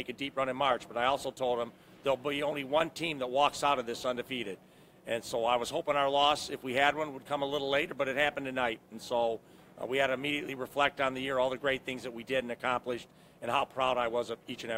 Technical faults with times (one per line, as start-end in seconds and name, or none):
none